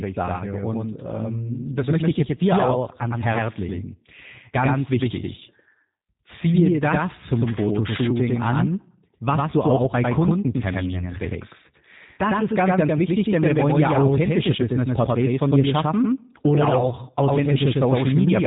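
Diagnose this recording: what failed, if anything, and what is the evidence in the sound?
Two things went wrong, and both run the whole length. There's a doubled audio track: the speech is mixed in twice, with a second full-band copy trailing about a tenth of a second behind at roughly the same level. It has no decay or room colour, so it's not an echo. The likely cause is a second, slower capture path or an edit holding two copies out of step.

On the codec side, this has gone through G.729. Nothing above 3.8 kHz survives, and the speech has that plainly audible rough, synthetic edge from being rebuilt out of a vocal tract filter, a pitch predictor and a few pulses per frame. That fits the 8 kbit/s VoIP codec.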